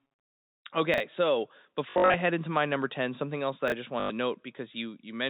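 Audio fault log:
0.94–1.00 s: chunks out of order. A 20 ms piece of sound plays two chunks late, after the audio that should follow it. Nothing is missing, but the sequence jumps. Three hard joins make the moment sound jumbled.
3.68–3.72 s: chunks out of order. The same fault recurs, with a 20 ms piece one chunk late. The swap is briefer.
1.90–2.14 s: packet loss with last packet repeated. About 180 ms goes missing across 240 ms, in runs of up to 60 ms. That fits 20 ms packets. Each gap is filled by replaying the previous packet. The repeats ignore the pitch period, so the runs buzz near 50 Hz, giving a robotic stutter.
4.00–4.10 s: packet loss with last packet repeated. A solid 100 ms is lost and filled the same way, giving a short buzzing stutter. The G.711 mu-law telephone coding leaves everything above 4 kHz absent throughout.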